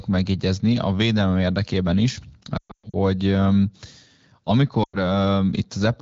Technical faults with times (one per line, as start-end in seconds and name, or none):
2.57-2.96 lost AMR speech frames
4.83-4.97 lost AMR speech frames